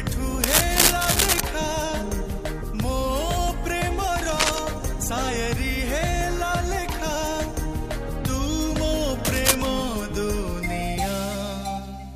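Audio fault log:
0.43–1.40 s, 4.25–4.59 s, 9.25–9.55 s: cable scratch noise. Dense, ragged scratching rustles over the audio, loudest in the first, longest burst and roughly level with the sound later, likely a worn cable or connector whose contact resistance flickers as it is moved.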